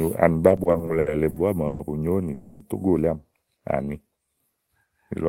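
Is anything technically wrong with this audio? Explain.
Yes, there are three network playback faults.

From 0.49 to 1.82 s, repeated stalls (stutter): packets kept arriving late, emptying the jitter buffer nine times. About 340 ms of extended sound was filled in, the longest gap 130 ms, so the speech drags and stutters without losing anything.

From 2.33 to 2.63 s, a call audio freeze: packets were likely held up in transit. The last sound is stretched across roughly 270 ms, then the speech resumes where it stopped, now running later.

From 3.85 to 4.08 s, a jitter buffer slow-down: the receiver repeated single pitch periods to rebuild its reserve, adding 51 ms. The speech plays at 83% speed with unchanged pitch, sounding drawn out.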